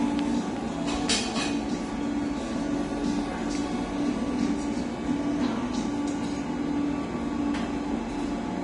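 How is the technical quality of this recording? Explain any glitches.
The technical quality is poor: clearly audible lossy-coding damage runs through the whole recording.

Throughout, nothing is present above 10.6 kHz, and the remaining treble sounds hissy and grainy, with roughened tones and smeared attacks. This is likely Vorbis compression at a low quality setting, consistent with roughly 32 kbps. At that rate the encoder removes the top octave and quantises the upper residue so coarsely that fine detail turns into noise of similar energy.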